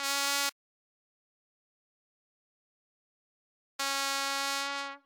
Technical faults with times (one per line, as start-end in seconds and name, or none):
0.50-3.79 audio dropout to silence